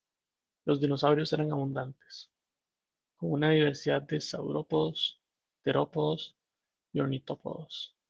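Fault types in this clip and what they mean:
No faults are present.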